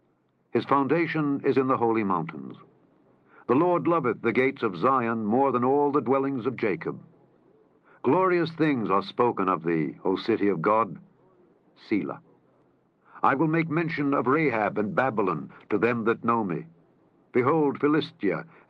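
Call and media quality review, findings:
Call bitrate drop, 13.88 to 16.31 s: audio goes rough and watery, top end dulls, then recovers. Likely a bandwidth-estimate dip making the Opus encoder code coarser, sounding like a fall from about 32 to 16 kbps.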